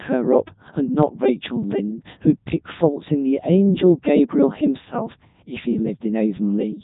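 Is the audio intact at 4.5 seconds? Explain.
No. The speech passed through the Codec 2 vocoder for the whole clip, including 4.5 s, at a rate that fits its 3.2 kbit/s mode. The decoder rebuilt the speech from sine waves, so it sounds robotic and buzzy, with nothing above 3.8 kHz.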